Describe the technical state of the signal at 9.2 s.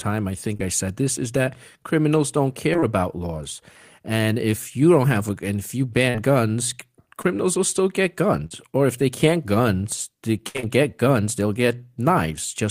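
At 9.2 s the speech signal is intact, with no audible fault at that moment.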